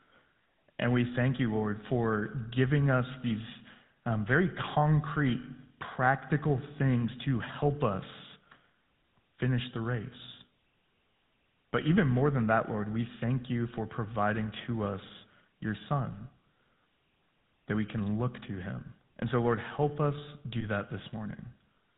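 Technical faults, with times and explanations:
Throughout: GSM full-rate codec. The speech passes through the original GSM codec, which models the vocal tract as a filter and excites it with a sparse, regular pulse train that keeps only one sample in three. Nothing above 4 kHz survives in this 13 kbps stream. The damage is plainly audible: the voice is narrow and muffled, with a buzzy, gravelly roughness laid over the voice because the thinned excitation cannot reproduce the natural fine structure.
20.6 to 20.65 s: lost GSM frames. Just after "help us", a bad frame is discarded and the decoder fills the gap by repeating the last good frame's settings. The loss is about 20 ms, which fits a single dropped frame. The sound does not break off. Instead it smears into a short, rough, metallic ring where the held vocal-tract shape keeps being excited without new information, before normal decoding resumes.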